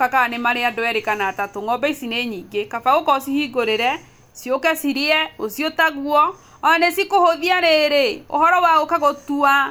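No technical faults can be heard at any point in the speech signal.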